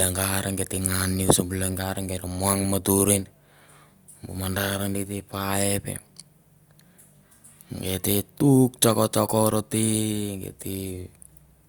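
No technical faults can be heard anywhere in the speech.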